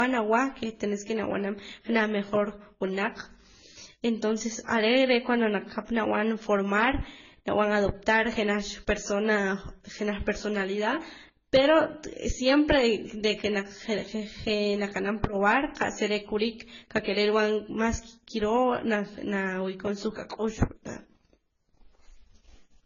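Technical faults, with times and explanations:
throughout, transcoding between lossy codecs: the speech likely passed through a low-rate AAC-style codec and then Vorbis, stacking both codecs' artefacts and leaving nothing above 7 kHz.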